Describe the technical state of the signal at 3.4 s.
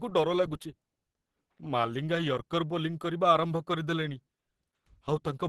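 At 3.4 s, as throughout, the speech was likely squeezed by Opus compression, and the texture fits a rate near 16 kbps with the encoder in its hybrid mode. Nothing sounds above 12.1 kHz, and the speech comes across muffled, hoarse and plainly degraded.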